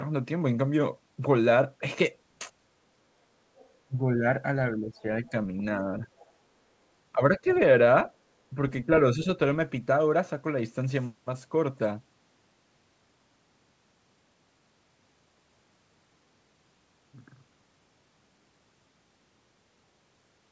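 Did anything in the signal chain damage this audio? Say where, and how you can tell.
Yes. Other side's voice leaking through at 3.57–3.69, 6.06–6.30 and 7.48–7.59 s: faint second-voice scraps, likely residual loudspeaker echo the call processing's echo canceller missed.

Speech suppressed in double talk at 3.88–4.24, 4.74–5.33, 5.84–6.09, 7.13–7.47 and 8.54–9.27 s: the voice dips by up to roughly 20 dB, likely as the echo canceller ducks both talkers.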